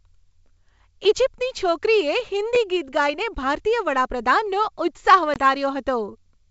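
At 1.04 s, just before "ઈજિપ્તની છોકરીએ", and again at 2.55 s, just before "ગીત ગાઈને ભારતીય વડાપ્રધાનનો", a repeated buffer occurs. New audio arrived late, so the last block played once more, giving a brief click-like stutter that fits a 10 ms buffer. From 5.34 to 5.40 s, after "ગાઈને ભારતીય વડાપ્રધાનનો ઉત્સાહ", packet loss on the ADPCM call leaves a hard-edged gap of about 20 ms, which points to one lost packet. The decoder's predictor then falls out of step with the sender's, so the speech comes back briefly distorted before settling.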